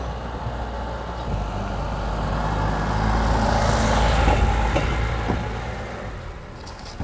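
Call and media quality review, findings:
Jitter buffer speed-up, 4.74–6.92 s: audio runs hurried at unchanged pitch, about 7% fast. Receiver jitter buffer over target after bunched late packets; it trimmed short pitch-period chunks repeatedly, dropping around 150 ms. Band-limited at 8 kHz, consistent with G.722 at 64 kbps.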